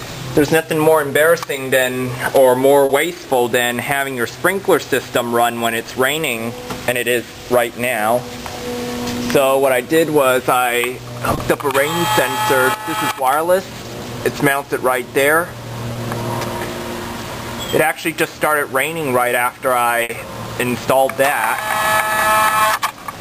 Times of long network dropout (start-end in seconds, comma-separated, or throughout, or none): none